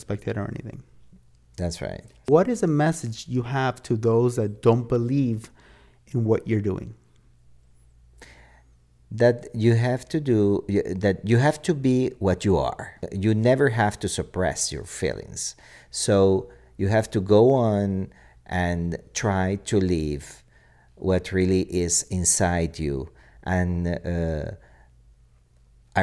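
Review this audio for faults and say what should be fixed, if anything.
Nothing needs to be fixed, since no faults turned up in the review of this audio.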